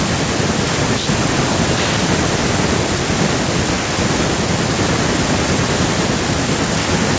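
Speech, with no technical faults to report.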